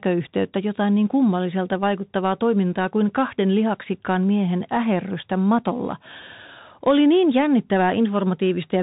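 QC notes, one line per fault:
Throughout, Bluetooth CVSD headset codec: the speech is band-limited with nothing above 3.8 kHz, and the codec damage is plainly audible. Each sample is coded as a single up-or-down bit with an adapting step size, so fast, loud high content outruns the step and distorts, leaving scratchy sibilants over a granular hiss.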